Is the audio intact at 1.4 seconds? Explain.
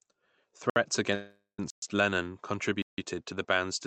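No. At 1.4 s the sound is inside a call audio freeze running from 1.15 to 1.59 s. Packets were likely held up and the jitter buffer ran dry. The last sound stretches into a fading buzz or hiss, ending in about 130 ms of silence. Speech then resumes about 0.44 s late, with nothing lost.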